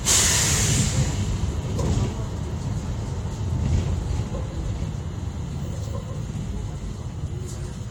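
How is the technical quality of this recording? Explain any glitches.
No glitches or technical faults can be heard here.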